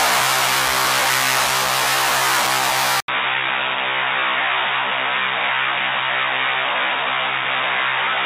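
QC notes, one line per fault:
3.00–8.26 s, likely an input switched to a poorer device: after an 80 ms silent gap the sound turns dull and boxy at much the same level. The spectrogram shows a hard ceiling at 3.8 kHz and a new noise floor about 40 dB down.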